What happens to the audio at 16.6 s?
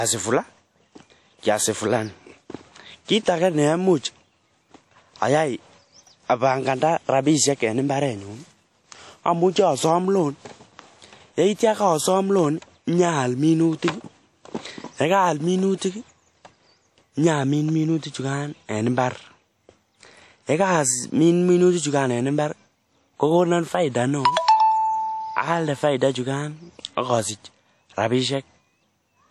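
At 16.6 s the speech carries the same codec damage heard across the whole clip, not a separate event. It sounds plainly washy and ringing, with hiss that rises and falls with the signal. Nothing remains above 14.3 kHz. The likely cause is WMA compression at a low rate, which fits about 48 kbps. Long transform blocks smear quantisation noise over tens of milliseconds. Weak spectral lines are zeroed out.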